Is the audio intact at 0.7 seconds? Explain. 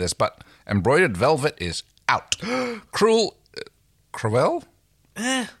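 Yes, the speech at 0.7 seconds is intact, with no dropout, click, distortion or other fault at that point.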